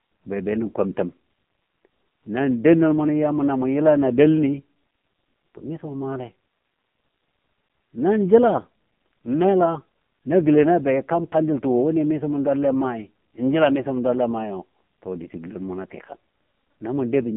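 From start to finish the speech runs through an AMR narrowband mobile codec. Nothing comes through above about 3.8 kHz, and the line band sits roughly 150 Hz to 3.5 kHz. The heavy buzzy, synthetic edge points to a low AMR-NB mode near 6 kbps.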